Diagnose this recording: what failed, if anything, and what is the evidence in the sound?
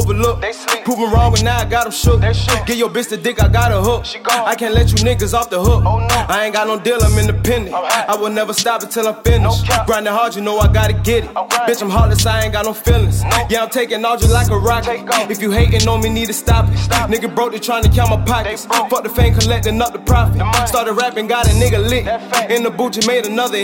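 Nothing in the signal points to a failure at any stage, as there are no dropouts, glitches, level jumps, distortion or timing disturbances to be heard anywhere in the recording.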